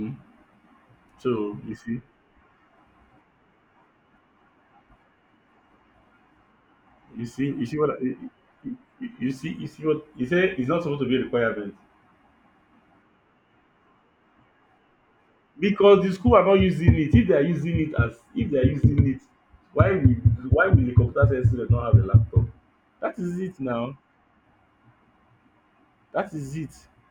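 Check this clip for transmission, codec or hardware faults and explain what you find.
One fault runs through the whole clip. Imaging from linear upsampling is present from start to finish. The spectrum points to audio raised from a 24 kHz rate to 44.1 kHz by joining samples with straight lines, which filters poorly. The top of the speech band is dulled, and a faint mirrored copy of the spectrum sits between 12 kHz and 24 kHz, roughly 50 dB below the signal. It comes through as a light metallic shimmer on sibilants.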